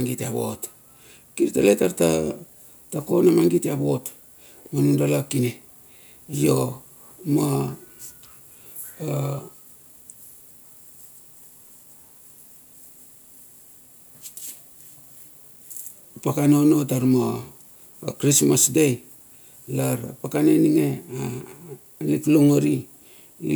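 No audible faults anywhere in the speech recording; nothing to flag.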